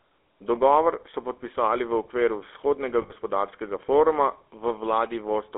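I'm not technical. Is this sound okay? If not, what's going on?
No. The speech sounds buzzy and gravelly from start to finish, like an old mobile phone call, and the bright upper range is cut off, leaving it thin and boxed-in. That is the GSM full-rate codec, the original digital mobile phone system. It rebuilds the voice from a simplified model of the throat and mouth driven by rough, regularly spaced pulses, and keeps only a narrow phone band, roughly 300 Hz to 3.5 kHz.

There is also a brief metallic, ringing smear from about 3.02 to 3.11 s, roughly 80 ms where the voice seems to stick on one sound. These are lost GSM frames. A short stretch of the signal never arrived, so the phone repeated the last good piece to cover the gap. That repeated piece is the rough, held ring you hear.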